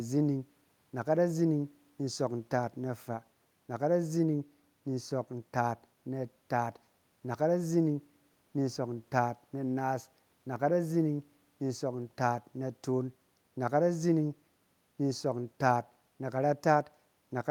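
A speech recording with no technical faults to report. The room's own background noise can be heard faintly, sitting about 43 dB below the speech.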